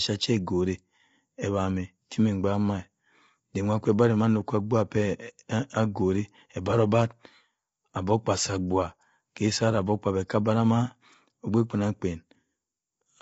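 Speech, with plainly audible low-delay AAC compression throughout: rough, grainy texture, likely from AAC-ELD near 24 kbps. A spectrogram shows noise between the harmonics and nothing above 7.8 kHz.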